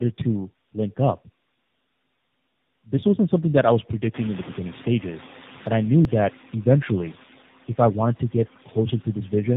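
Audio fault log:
throughout: noise suppressor artifacts. The suppressor estimates which frequency bands hold steady noise and pulls them down frame by frame, here by about 10 dB. Between phrases the background sinks, then swells back under the speech. The room noise rises by about 22 dB at around 4 s, where it sits about 19 dB below the speech.
throughout: tandem speech coding. The speech passes through two low-rate speech codecs in a row, decoded and re-encoded at each link. The result fits a G.729A stage at 8 kbit/s and an AMR-NB stage at 10.2 kbit/s, with a G.711 A-law hop between them. The second coder works on the first coder's already damaged output. This piles up roughness and a warbly, muffled quality.
6.05 s: dropped buffer (overrun). A small jump is heard in the sound, where a couple of milliseconds of audio go missing and the two sides butt together with no gap of silence. The likely cause is that the samples were not read out before the hardware overwrote that buffer. 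The lost piece is too short to take away part of a word.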